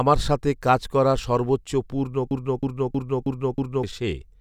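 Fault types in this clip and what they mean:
Broken-record loop: At 2.31 s the speech stops moving forward, and a fragment of about 320 ms plays five times back to back, each repeat identical, until the loop ends at 3.83 s. That jammed, stuttering repetition is the giveaway. The likely cause is a player or stream that stalled and kept pushing out the last chunk it had buffered. So roughly a second and a half of what should have been said never arrives.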